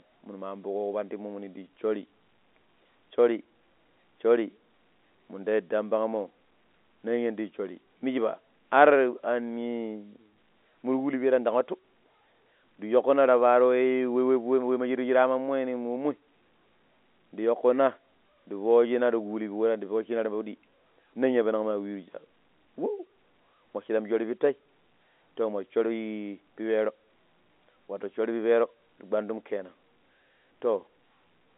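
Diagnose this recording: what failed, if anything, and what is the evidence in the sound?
Nothing stood out on listening to this telephone-band speech recording, which carries the narrow, roughly 250 Hz to 3.6 kHz sound expected of a G.711 line.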